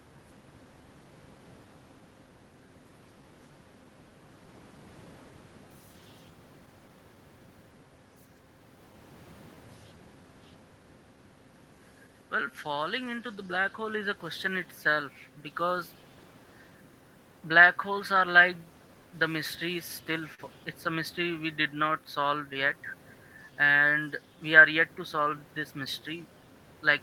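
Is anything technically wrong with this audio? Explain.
Yes. The speech has timing faults caused by a mismatch between the sender's and receiver's clocks, plus one brief stall.

Clock drift between sender and receiver runs through the whole clip. The sender's clock is slow by roughly 3 percent relative to the receiver. Audio therefore arrives slightly slower than it is played out, and the jitter buffer keeps drifting toward empty. The receiver has to compensate continuously. The result is a tempo that feels faintly uneven rather than one clean glitch.

Repeated timing corrections are the receiver's response to that drift, from 0.12 s to 26.75 s. To keep the buffer from running dry, it repeatedly repeats short slices of audio, all in the same direction and at uneven spacing. Together they stretch playback to about 97 percent speed, adding around a second over the stretch. Each edit is small, so they come across as occasional hiccups and a slightly dragging rhythm.

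A short stall from a late packet occurs at 20.34 s to 20.41 s. A packet missed its playout time, the buffer ran empty, and the receiver held the last sound for 42 ms until the packet arrived. Playback then resumed from the same point, so nothing is lost, but that sound is briefly prolonged with a slight buzzy or dipped quality. The delay grows by 42 ms from that point. Room noise, about 29 dB below the speech, belongs to the recording itself.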